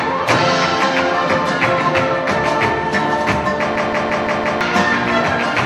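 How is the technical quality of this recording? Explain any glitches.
The recording has one serious glitch, a system hang loop from 3.76 to 4.61 s. During that stretch the playback or recording system stalled while the audio hardware kept replaying the same ring buffer. A 170.67 ms slice, which fits an 8192-sample buffer at 48 kHz, repeats exactly five times at about 5.9 Hz. The result is a rapid machine-gun stutter, and about a second of real audio is lost. On a waveform, identical blocks sit side by side with hard seams. A spectrogram shows the same pattern stamped repeatedly, with vertical edges at each wrap.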